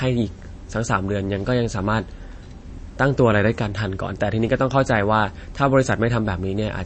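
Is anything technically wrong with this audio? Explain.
Yes. Throughout, likely MP3 compression at a starved bitrate, around 32 kbps: the treble is cut above 8.3 kHz and weak frequency lines drop out frame to frame, making the speech dull and watery.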